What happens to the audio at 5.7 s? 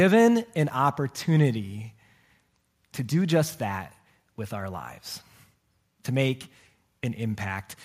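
Nothing goes wrong at 5.7 s; the speech continues intact through that moment with no dropout, click, distortion or other fault.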